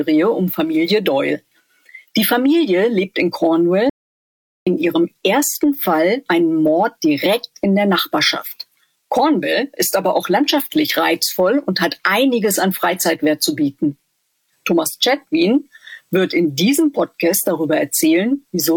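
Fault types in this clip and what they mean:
audio dropout to silence: the input likely dropped out while silence was still written, so at 3.90 s the sound cuts to dead silence, no room tone, for about 0.77 s.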